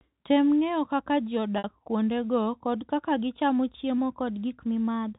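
Packet loss with pitch repetition occurs at 1.58 s and lasts until 1.64 s, a gap of 60 ms, which fits three consecutive 20 ms packets going missing. The receiver bridged the hole by repeating the last pitch period of the speech and fading it down, so instead of a dropout the voice briefly freezes into a held, slightly buzzy tone before normal speech resumes.

A drift correction step begins at 3.98 s and lasts to the end of the clip. From that point the speech runs about 5.7% faster, and its pitch rises by about 95 cents, just under a semitone. Speed and pitch move together, which sounds like tape running fast rather than a pitch-shift effect. The likely cause is clock-matching software abruptly changing the playback rate to drain a buffer that had filled up. The voice suddenly sounds detuned and hurried.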